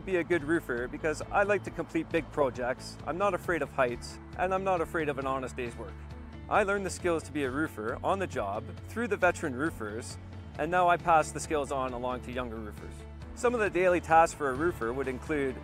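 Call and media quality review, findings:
No faults found in this clip. Nothing here calls for follow-up on the call or media path.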